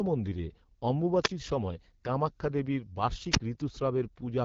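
Throughout the speech there is a rough, raspy edge, with hissy, smeared upper frequencies. This is AMR wideband (HD Voice) codec damage. The codec models speech as pulses through a vocal tract filter only up to 6.4 kHz and fills the band above with shaped noise. The coarse texture heard here fits one of the lowest modes, around 8.85 kbit/s, which has too few bits to carry the waveform's detail.

At 1.23 s the hiss swells briefly, then drops into a near-silent hole of about 34 ms before the speech returns at 1.29 s on "সময় কামাক্ষ্যা দেবীর". At 3.31 s, just after "সময় কামাক্ষ্যা দেবীর", the same pattern recurs with a longer gap of about 49 ms, ending at 3.40 s. Both are wireless microphone squelch dropouts. The FM radio link weakened, the noise rose, and the receiver's squelch muted the output until the signal recovered.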